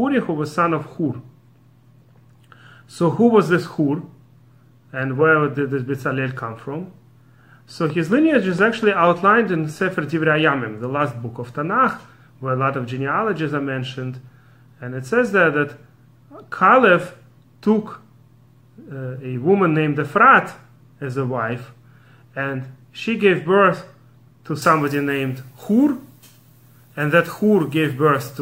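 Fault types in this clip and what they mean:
Train of clicks: From 7.90 to 9.08 s, a run of roughly seven near-identical pulses ticks over the audio at a steady 4.3 per second, peaking about 5 dB above the surrounding sound. This is likely interference from nearby equipment or a faulty connection or power supply. Unlike random crackle or a single dropout, each click has the same shape and spacing, and the ticking continues through quieter moments rather than following the sound's own level.
Pre-emphasis left on: From 24.62 s to the end, the treble rises along the 75 µs FM pre-emphasis curve. The boost starts climbing above roughly 2 kHz and reaches about 14 dB at 10 kHz relative to 1 kHz, because the matching de-emphasis was never applied. The sound turns thin, bright and hissy with exaggerated sibilance. An ordinary EQ treble lift would not follow this steady standard curve.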